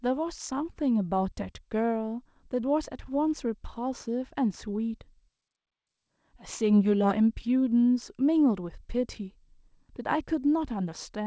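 Nothing stood out on listening to this speech, which carries the usual character of a G.722 call path with no content above 8 kHz.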